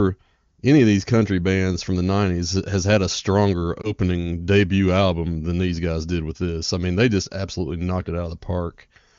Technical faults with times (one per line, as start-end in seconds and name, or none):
3.81-3.92 lost AMR speech frames